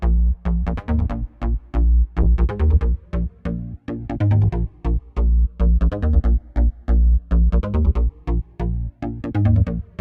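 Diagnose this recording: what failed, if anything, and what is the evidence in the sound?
A call bitrate drop at the codec stage, from 2.23 s to 6.07 s: the sound turns coarse and loses its top end above 12 kHz, with the worst stretch lasting about 2.5 s. That fits the encoder being throttled from around 64 kbps to near 21 kbps.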